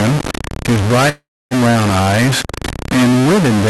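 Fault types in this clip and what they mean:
Stuck bit, throughout: grainy noise or buzzy distortion runs through the whole clip, and the pauses fill with noise, likely from one data bit held fixed, shifting many sample values.
Long network dropout, 1.09 to 1.54 s: the sound becomes a fading buzz or hiss and then near silence for about 0.28 s, likely because about 0.42 s of audio never arrived.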